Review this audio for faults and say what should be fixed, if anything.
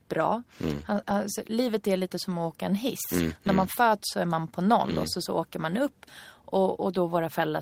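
Lost packets rebuilt from error correction at 0.85–0.99 s and 1.04–1.11 s: the decoder played low-bitrate copies, about 80 ms then 40 ms, so there's no gap but it sounds rougher and noisier.

Short concealed packet loss at 1.01–1.04 s: roughly 20 ms never arrived in time, so the receiver stretched the last sound over the hole, leaving a brief smear.

To prevent both, fix the network path dropping that burst of packets, for example with better routing or a larger jitter buffer.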